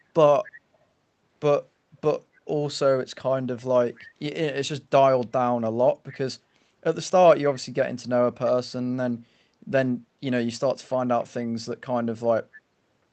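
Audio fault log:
3.97–4.07 s, 6.09–6.15 s, 11.41–11.46 s, echo leak: brief scraps of the speech return about 260 ms late, far quieter than the original. This is likely a far-end loudspeaker feeding its microphone, with the echo canceller missing short fragments.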